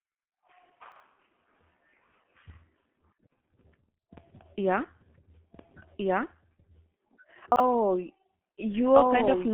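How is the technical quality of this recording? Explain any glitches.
The technical quality is poor: heavy low-bitrate codec damage runs through the whole speech clip, two short stretches play out of order, and a second copy of the audio enters partway through.

G.723.1 codec, throughout: the speech was squeezed through this early internet-telephony codec, at a rate that fits its 6.3 kbit/s mode, working on 30 ms frames. The line band is roughly 200 Hz to 3.4 kHz, with nothing above 3.8 kHz. Because the codec models the voice coarsely and refreshes that model slowly, the damage is heavy: the speech sounds muffled and hoarse, and consonants smear into their neighbours.

Chunks out of order, at 0.92 to 1.0 s and again at 7.52 to 7.6 s: in each case a 40 ms chunk of audio was delivered or written one chunk late, so it plays after the chunk that should have followed it. Nothing goes missing, but the sequence is swapped, leaving three abrupt joins each time. 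Each spot is heard as a brief jumbled stutter.

Doubled audio track, from 4.94 s to the end: a second full-band copy of the same audio joins the mix about 1.5 s behind the original and at roughly the same loudness. This is likely due to the signal being captured again through a slower path, or to an edit that left two copies out of step. The copy switches on abruptly, with no decay or room colour, so two overlapping versions of the speech talk over each other until the end.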